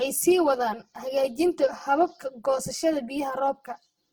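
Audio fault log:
Throughout: channel delay (comb filtering). One channel trails the other by roughly 5 ms, and summing them to mono cancels shared content at evenly spaced frequencies, starting near 100 Hz. That leaves the speech hollow and phasey. A spectrogram shows fixed, regularly spaced dark horizontal notch bands running the full length.
Throughout: Opus compression. The speech sounds rough, grainy and noisy in its tonal parts, with plainly audible coding damage, likely from Opus at a low bitrate around 16 kbps in its music mode. Band energy is kept but filled with folded or noise content, so a spectrogram shows smeared, speckled texture in place of clean harmonics, though content still extends to about 20.2 kHz.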